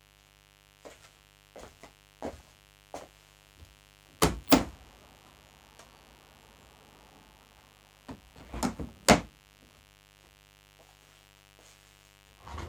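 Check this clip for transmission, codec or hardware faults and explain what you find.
There's one fault here, and it runs the whole way through: a mains buzz underneath the sounds, from start to finish. It's a steady, raspy buzz built on 50 Hz. Something like a dimmer, a rectifier or a missing shield is letting sharp switching spikes into the signal twice per mains cycle, and those spikes spray harmonics of 50 Hz up into the several-kHz range. That's why it sounds gritty rather than like a clean hum. It sits well under the main sound, roughly 25 dB down.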